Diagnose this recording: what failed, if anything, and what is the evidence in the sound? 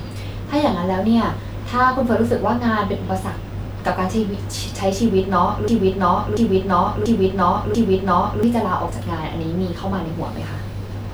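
Playback or stream buffer stalled, most likely: from 5.68 to 8.43 s the speech turns into a broken-record loop, the same 0.69 s fragment repeating exactly, back to back, four times. The player kept resending what it held, so the audio that belonged there is gone.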